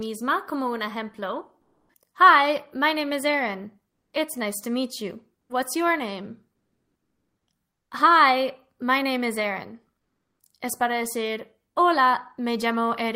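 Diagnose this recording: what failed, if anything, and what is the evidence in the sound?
Comfort noise in place of the background, codec stage: at 1.63–1.87 s and 6.55–7.45 s (after "your name") the background level changes by about 12 dB and 3 dB. It turns featureless, likely because Opus DTX paused sending and the receiver synthesised noise. On a spectrogram these stretches appear as smooth, textureless bands.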